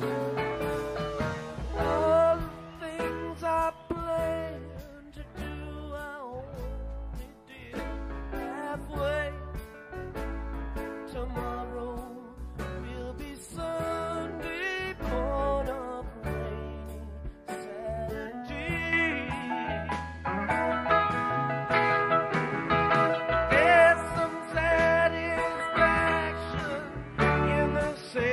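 From 18.93 s to the end, the audio abruptly turns duller, with nothing above 11.4 kHz, a level shift of about 5 dB and a new noise floor around 45 dB down, with no gap at the change. The likely cause is an input switched to a poorer device.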